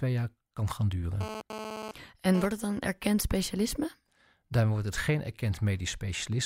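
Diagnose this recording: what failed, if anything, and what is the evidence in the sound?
GSM phone buzz enters at the analogue wiring stage. After "jaar kan gaan", at 1.21 s, a hard, raspy buzz cuts in over the speech. It stops at 2.46 s, just before "het dan erkend specialisme". It repeats at about 217 Hz and carries many harmonics. It sits about 9 dB below the speech and ignores it. A nearby 2G phone was sending data in bursts. The audio circuit rectified those radio pulses into sound.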